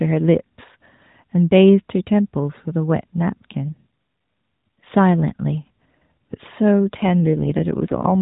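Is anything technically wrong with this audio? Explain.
Yes. An AMR rate drop runs from 6.98 to 8.16 s. The link pushes the AMR narrowband codec down from 12.2 to 5.9 kbps, trading speech bits for error protection. The band and the timing hold without a gap, but the speech turns rougher and more synthetic until the end.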